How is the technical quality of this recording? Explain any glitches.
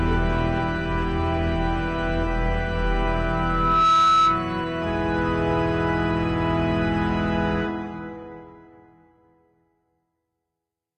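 The recording has two clear faults.

From 3.08 s to 4.63 s there is loudspeaker feedback squeal: a microphone hears its own loudspeaker, and the loop gain passes one at 1.3 kHz. That single tone swells over about 0.7 s to roughly 5 dB above the surrounding sound. Unlike a test tone or whistle, it builds up by itself rather than starting at full level.

From 7.10 s to the end, the sound shows an adaptive stream at a lower bitrate: a slowing connection made the player switch to a leaner encoding. The change fits a drop from about 96 kbit/s AAC to about 20 kbit/s HE-AAC. Codec artefacts increase and nothing remains above 14.8 kHz. Unlike a dropout, the quality changes abruptly with no gap.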